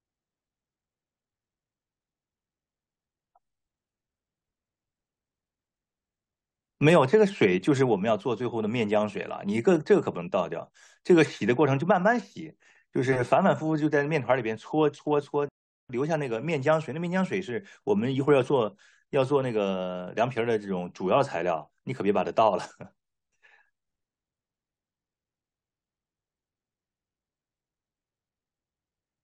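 At 15.49 s the speech drops into a rebuffering stall: playback ran dry, sat silent until 15.90 s, then picked up exactly where it paused, adding 0.41 s.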